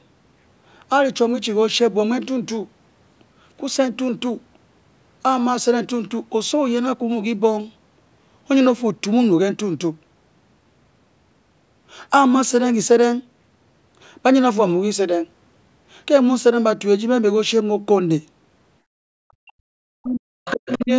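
From 18.81 to 19.03 s the background is gated by the echo canceller: room noise drops by about 33 dB for roughly a fifth of a second, a near-empty gap in the spectrogram.

From 19.31 to 20.9 s the speech dips and breaks apart, falling by around 40 dB across about a second and a half. The waveform is hollowed into fragments. This is likely speech suppressed in double talk.

From 20.45 to 20.85 s a second voice sits roughly 10 dB under the talker, faint extra harmonic traces in the spectrogram. This is likely the other side's voice leaking through.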